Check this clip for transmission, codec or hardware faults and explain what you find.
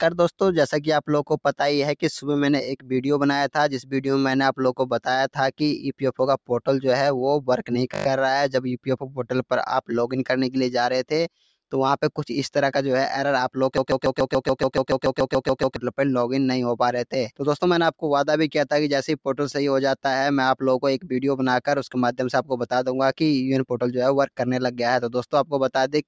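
Three kinds of fault turn up: two noise-suppressor dips, a brief hang loop and a longer stuck repeat. The band tops out at 8 kHz, as expected from call microphone processing.

Sound cut by the noise suppressor, 5.78–6.03 s and 8.83–9.25 s: the suppressor judged part of the signal to be noise and pulled it down, by about 10 dB and then about 11 dB, for roughly a fifth and a third of a second. The sound briefly sinks in level.

System hang loop, 7.94–8.06 s: the driver or system stalled while the hardware kept replaying a 20 ms ring buffer. Six exact repeats form a short 50 Hz buzz, with almost no audio lost.

Broken-record loop, 13.78–15.76 s: a 0.14 s fragment repeats exactly, back to back, fourteen times, stuttering for about two seconds while the audio meant for that stretch never arrives. The likely cause is a stalled player, encoder or stream resending its last fragment.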